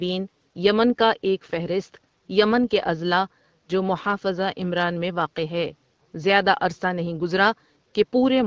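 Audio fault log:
No faults found in this speech; the call-style band limit with nothing above 8 kHz and the light shaping from HD Voice AMR-WB coding at 12.65 kbit/s are both normal for this path.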